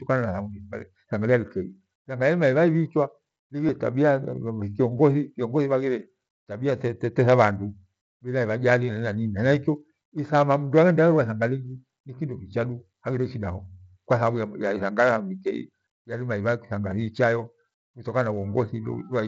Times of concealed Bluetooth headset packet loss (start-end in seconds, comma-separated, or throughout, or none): 3.67, 4.98